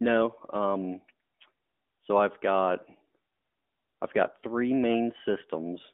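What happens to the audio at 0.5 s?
At 0.5 s the speech is running through the AMR narrowband mobile codec, as it does for the whole clip. It models the vocal tract from a few pulses per frame, and the line passes only 250 Hz to 3.5 kHz. The speech sounds thin and clearly buzzy, which fits a mid-rate mode near 10 kbps.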